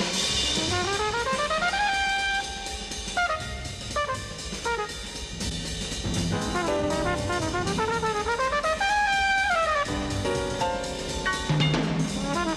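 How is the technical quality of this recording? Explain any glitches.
No glitches can be heard anywhere in the recording. The sound stays steady and continuous throughout, with nothing breaking into it.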